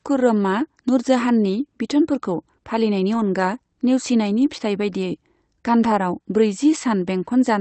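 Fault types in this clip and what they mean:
Lost packet rebuilt from error correction: a few packets dropped out, but each following packet carried a low-bitrate backup copy, so nothing goes silent. You just hear brief rougher, noisier patches near 3.13 s, 4.37 to 4.59 s and 5.83 s.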